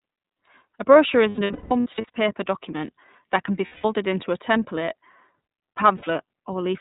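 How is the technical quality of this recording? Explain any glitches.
The speech has clear codec damage throughout and three dropout episodes.

The iLBC codec is audible across the whole clip. Nothing above 4 kHz passes, and coding each frame's excitation independently leaves a rough, slightly synthetic edge. The texture suggests the 13.33 kbps mode with 30 ms frames.

There are lost iLBC frames from 1.29 to 2.10 s, where 510 ms of dropouts are scattered over 810 ms, the longest run around 200 ms. Shorter losses follow at 3.66 to 3.85 s (180 ms) and 5.97 to 6.04 s (60 ms). The decoder repeats the last pitch cycle with added noise, so each gap sounds like a held, buzzy vowel, fading in the longer runs. Because frames stand alone, the speech recovers almost immediately.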